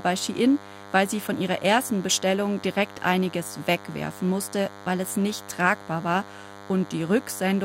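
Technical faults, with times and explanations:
Throughout, DECT cordless phone buzz: a nearby DECT handset or base transmits a radio burst every 10 ms, and the audio circuitry rectifies it, so a thin, steady 100 Hz buzz rich in harmonics sits under the speech, roughly 20 dB below it.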